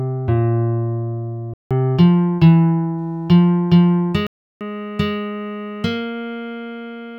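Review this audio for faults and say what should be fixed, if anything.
Block of digital silence at 1.54 to 1.71 s and again at 4.27 to 4.61 s: the sound drops abruptly to silence and returns with no fade, leaving an audible hole of about 170 ms, then about 340 ms. The second gap is exactly twice the first, which fits whole 8192-sample buffers at 48 kHz going unfilled in time. Prevent it by giving the audio thread enough processing headroom or larger buffering so every block is delivered before its deadline.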